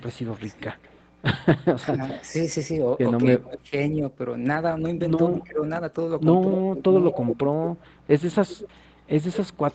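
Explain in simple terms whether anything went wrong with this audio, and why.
Two things went wrong. There's an echo leak: a faint delayed copy of the speech, about 0.21 s behind, from 0.00 to 2.30 s, briefly at 5.40–5.44 s, and louder from 6.56 s to the end. The other side's echo canceller likely missed it. There's also speech suppressed in double talk: the speech dips or drops out at 0.53–0.63 s, 1.75–2.01 s and in patches between 3.39 and 7.19 s, likely while both sides were talking at once.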